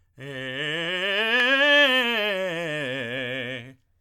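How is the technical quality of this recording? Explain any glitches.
The music comes through with no technical glitches: there are no dropouts, level jumps, or added noise anywhere in the recording.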